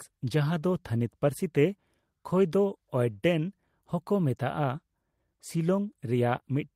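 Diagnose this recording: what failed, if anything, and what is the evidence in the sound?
No audible fault in this recording.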